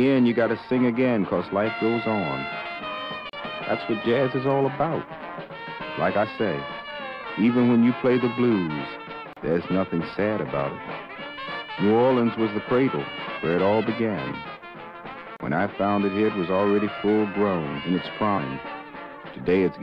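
Gaps at joins of encoded pieces open at 3.30–3.33 s, 9.33–9.37 s and 15.37–15.40 s, recurring every 6.0 s, each a silence of about 34 to 37 ms cut into otherwise continuous audio. The audio appears to have been encoded in separate 6-second pieces and concatenated untrimmed, so each piece's leading encoder delay and padded final frame survive as dead air. The codec smears the edges of each gap, and the sound resumes exactly where it stopped.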